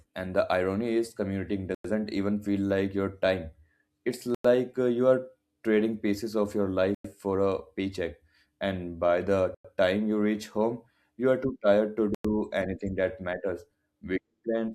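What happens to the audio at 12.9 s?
Nothing goes wrong at 12.9 s; the speech carries on intact through that moment with no audible fault.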